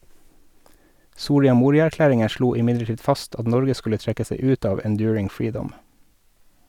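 No technical faults occur anywhere in the speech, so there is nothing to describe in time order.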